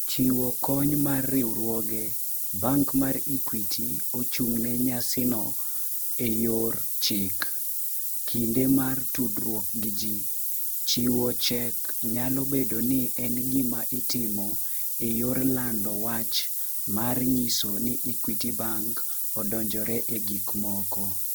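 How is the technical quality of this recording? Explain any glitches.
Poor: two faults run through the whole speech recording. Throughout, low bit depth with noise shaping leaves a steady, bright hiss roughly as loud as the speech. It fits about 5-bit quantisation with the rounding error pushed upward, and unlike broadband noise it climbs sharply toward the top of the band. Also throughout, the speech sounds rough and grainy across the full bandwidth rather than swirly, likely from Opus compression in CELT mode near 16 kbps filling starved bands with noise.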